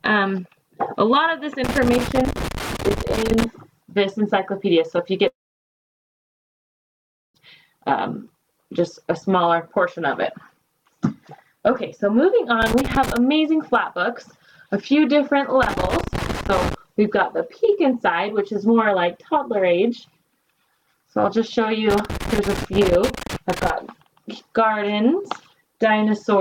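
From 1.64 to 3.44 s a loose connector crackle breaks in: an irregular burst of scratching as a worn or dirty contact makes and breaks, chopping the signal. The waveform shows ragged gaps and spiky transients, and the spectrogram shows scattered broadband vertical streaks. The same crackle returns at 12.62–13.17 s, 15.63–16.74 s and 21.90–23.70 s, each time as a similar cluster of clicks and chopped fragments.

Between 5.27 and 7.36 s the sound stops and about 2.1 s of audio is lost, most of it heard as silence. It then resumes further on with nothing of the missing stretch, which points to a likely long network dropout. The waveform goes flat across the gap, and the spectrogram shows a blank band before the content resumes abruptly.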